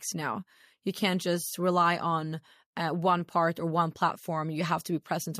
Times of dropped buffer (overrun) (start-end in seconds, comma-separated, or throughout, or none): none